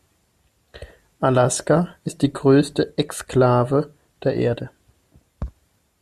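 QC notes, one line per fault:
No technical faults are present in the speech signal anywhere along its length.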